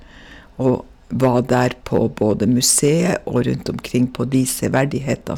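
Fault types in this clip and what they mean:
Hard clipping: the speech is driven about 6 dB past what the chain can pass, so roughly one percent of samples get flattened, adding crackle on loud syllables.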